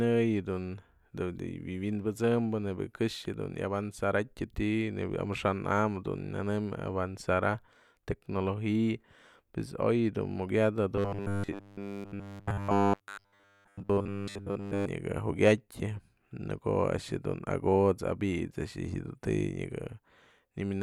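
From 10.96 s to 14.87 s the speech collapses into robotic sound from repeated short buffers: a rigid, metallic buzz at 100 Hz that only loosely tracks the words. The likely cause is audio arriving too seldom, so playback loops the last 10 ms segment for essentially the whole stretch while fresh audio is dropped. A waveform shows identical 10 ms cycles tiling the span, and a spectrogram shows evenly spaced harmonic lines at multiples of 100 Hz.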